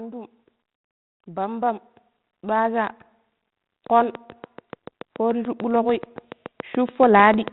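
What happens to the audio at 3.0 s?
Nothing goes wrong at 3.0 s; the speech runs on intact through that moment, carrying only the light texture of the 32 kbit/s G.726 ADPCM channel it passes through.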